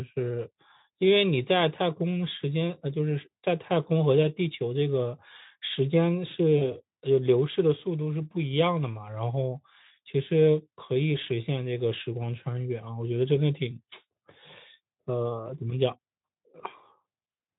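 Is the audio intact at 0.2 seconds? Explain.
Yes, at 0.2 seconds the speech is intact, with no fault there.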